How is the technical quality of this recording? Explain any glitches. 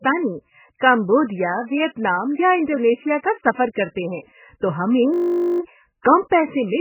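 The technical quality is poor: heavy codec damage runs through the whole recording, and a loop glitch near the end.

Throughout, the audio was likely squeezed through MP3 encoding at a very low bitrate, around 8 kbps. Starved of bits, the encoder discards everything above 3 kHz and drops weak frequency detail between frames, so the speech sounds muffled, watery and swirly, with smeared consonants.

From 5.14 to 5.6 s, a system hang loop occurs: the system froze while the sound hardware kept replaying the same 20 ms of buffered audio, 23 times over. Repeating at 50 Hz, it becomes a steady buzz, with little or nothing of the recording lost.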